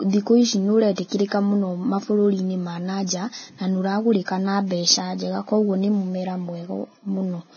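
Throughout the speech, nothing sounds above 6.5 kHz, and the remaining treble is hissy and grainy, with roughened tones. This is heavy Vorbis compression, likely at a low rate, which fits a bitrate near 17 kbps. The coarsely quantised residue turns fine detail into noise, unlike a simple low-pass filter, which would sound dull but clean.

From 0.96 to 0.98 s, a 23 ms smear of hiss arrives just before a sharp onset. This is pre-echo: the codec spread the quantisation noise meant for the loud attack across the quiet start of its block. Because it leads the attack, it differs from reverberation or ringing, which trail after it.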